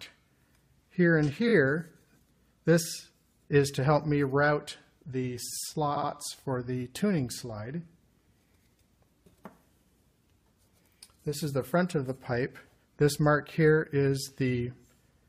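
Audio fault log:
1.48–1.52 s and 5.96–6.10 s, repeated frames: a 23 ms block, then a 70 ms block, each plays two extra times, adding 46 ms and 139 ms. This is a stutter of identical material, not a silent gap.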